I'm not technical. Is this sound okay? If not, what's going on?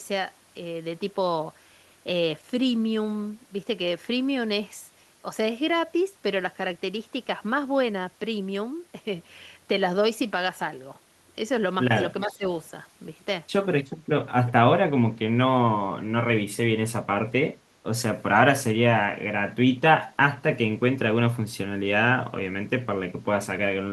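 No, there are two small problems. At 12.26 to 12.44 s, about a fifth of a second, the voice briefly turns noticeably quieter. This is speech suppressed in double talk, likely from the call's echo canceller mistaking talking over each other for echo. It makes the voice dip, with no second copy.

At 13.85, 14.46 and 20.07 s, short, faint scraps repeat what was said about a third of a second earlier. That is echo leak, likely from leftover loudspeaker sound being sent back. Unlike the dip, this adds a repeat.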